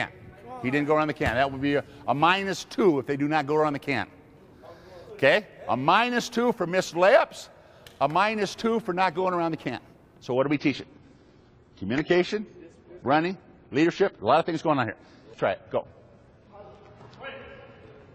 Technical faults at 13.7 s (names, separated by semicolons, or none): adaptive stream at a lower bitrate